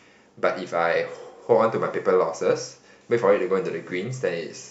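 Nothing technically wrong turns up in this short speech clip, so there are no fault times or causes to point to.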